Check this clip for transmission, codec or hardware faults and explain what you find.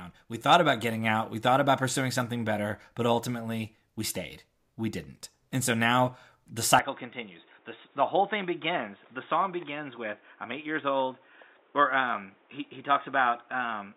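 One fault is present: an input switched to a poorer device from 6.79 s to the end, right after "so now the". The recording input likely changed to a lower-grade microphone or a headset call profile whose band stops near 3.8 kHz. The speech abruptly turns dull and boxy with no gap at the switch, drops a few decibels in level, and picks up a faint new background noise well below the voice.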